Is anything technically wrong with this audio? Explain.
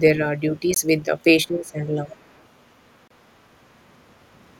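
Yes. Three kinds of fault occur in this speech. A Bluetooth stall, likely from interference delaying packets until the headphone buffer emptied, drops the sound to silence at 0.74 s for 19 ms and again from 3.08 to 3.11 s for 28 ms.

Speech suppressed in double talk, likely because the echo canceller could not separate the talker from loudspeaker echo, dips the voice from 1.46 to 1.81 s, at its deepest by roughly 20 dB.

The other side's voice leaking through, likely as loudspeaker pickup left in the microphone by the echo canceller, is barely audible at 1.67 to 1.71 s and clearer from 2.08 to 2.46 s, roughly 25 dB below the speech.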